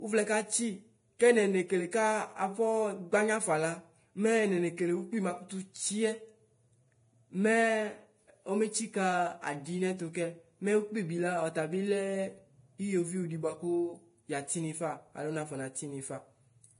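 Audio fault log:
Throughout: Vorbis compression. The speech is hissy and grainy, with roughened tones and softened consonant attacks, and nothing sounds above 10.6 kHz. This is likely Vorbis coding at a low rate, which fits roughly 29 kbps: the treble residue is quantised so coarsely that fine detail turns into noise of similar energy. Steady broadband hiss from a noisy source would not change with the sound, but this graininess follows the spectrum of the speech itself.
1.19 s and 1.91 s: pre-echo. Each sharp onset is preceded by a short burst of hiss, spread over about 14 ms and 13 ms respectively, and the attack itself sounds smeared. The transform block spreads its quantisation noise evenly across the whole block, so noise scaled to the loud onset also fills the quiet gap just before it. Unlike a click or dropout, the added sound comes before the onset.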